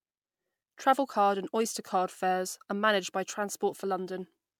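Repeated lossy re-encoding is the likely cause here: the speech appears to have been run through an MP3 encoder a few times in succession, each pass re-quantising on a shifted frame grid, with artefacts consistent with roughly 128 kbit/s. Across the whole clip that generation loss accumulates as a swirly, hollow coloration with smeared consonant attacks and patchy gaps in the upper spectrum, sounding rougher than a single encode at that rate would.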